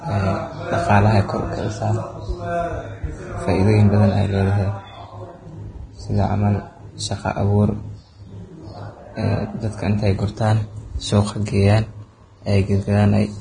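Likely heavy Vorbis compression, consistent with a bitrate near 24 kbps, throughout: treble detail turns to grainy hiss, and nothing remains above 9.7 kHz.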